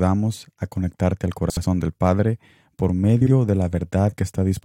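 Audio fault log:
1.50–1.65 s (just after "a conectarte al") and 3.21–3.31 s, frames out of order: a brief garbled flutter, because two neighbouring blocks (about 70 ms, then about 46 ms each) play swapped. No time is lost.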